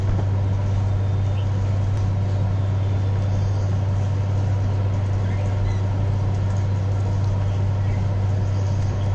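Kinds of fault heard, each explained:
No audible faults detected.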